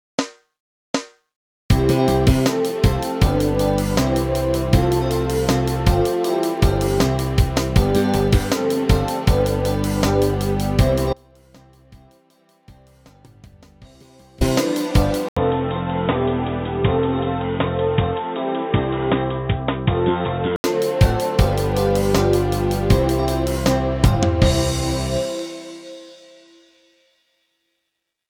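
From 11.13 to 14.41 s the sound drops away abruptly, leaving only a faint trace roughly 30 dB below its normal level for about 3.3 s before snapping back. This is an audio dropout to a faint residue. The wanted signal was likely lost while the path after the break stayed live.

At 15.29 s there is an 80 ms silence, then the sound turns dull and boxy, with nothing above 3.8 kHz and a new noise floor about 35 dB down, at much the same loudness. It clears again at 20.64 s. This is most likely an input switched to a poorer device.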